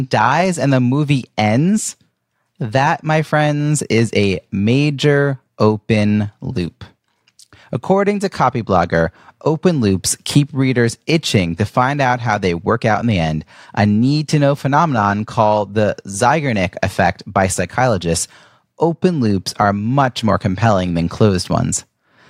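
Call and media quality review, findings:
Nothing to flag on this speech recording; I listened all the way through and heard no problems worth a ticket.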